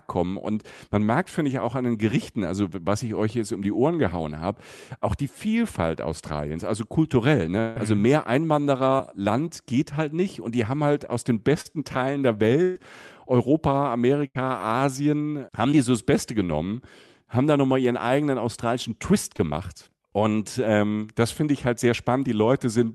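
A speech recording carried over a call path, where the audio tops out near 12 kHz as a call codec such as Opus would leave it, loses packets several times. Right after "also kulturell", from 7.59 to 7.77 s, about 160 ms of sound is missing and replaced by a continued, fading tone with no silence, likely a long network dropout that the receiver papered over. A burst of packet loss, several packets lost together, hits at 12.63 to 12.77 s (120 ms) and 14.27 to 14.37 s (80 ms), where the last sound is held as a buzz or hiss and then the speech resumes further along. Short concealed packet loss, a few hundredths of a second never reaching the decoder, leaves brief smears after "haben halt aus den" at 11.61 to 11.67 s, just before "die so das" at 15.71 to 15.74 s, and at 19.36 to 19.40 s.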